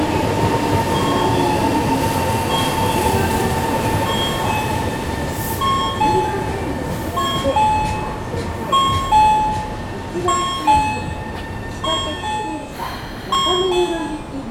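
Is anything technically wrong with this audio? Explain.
Yes. There is a block of digital silence at 13.35 s: for about 1.5 ms the sound drops straight out, which fits an output buffer that wasn't filled in time. The abrupt cut out and back in leaves a single sharp tick in the sound.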